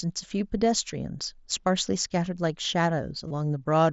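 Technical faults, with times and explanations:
3.27 to 3.31 s, concealed Bluetooth headset packet loss: about 30 ms of audio goes missing on the wireless link between headset and phone, which fits a short run of roughly four consecutive headset packets. The receiver fills the gap by repeating the closest-matching stretch of the speech it has just received. Because several packets are lost in a row, the patch becomes a brief buzzy, held tone at full level, followed by a slight warble as the real speech resumes, all within the 16 kHz-sampled mSBC link.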